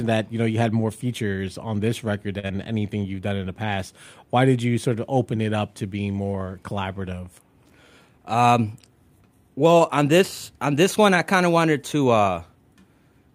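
At 2.39 s there's a short stall from a late packet. A packet simply hadn't turned up when the jitter buffer needed it, so the buffer ran dry and the receiver held the last bit of speech for about 39 ms until the packet landed, then picked up right where it left off. Nothing's lost, but that sound hangs a touch too long, with a faint buzzy dip, and the playout delay goes up by those same 39 ms.

Right after, from 2.47 to 2.51 s, there's a short concealed packet loss. About 20 ms of audio never made it to the decoder in time, so the receiver papered over the gap by carrying the previous sound forward and then blending back into the real signal. Coming hard on the heels of the stall, it's a quick smear or wobble rather than a clean transition, and a brief consonant there could easily get swallowed.

Later, from 8.02 to 8.37 s, you get a jitter buffer speed-up. The buffer had built up more audio than it wants, so the receiver trimmed out tiny pitch-period-sized slices one after another, around 50 ms in total. 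The speech runs at about 111% speed over that stretch while the pitch stays put, so it comes across as rushed rather than chipmunky.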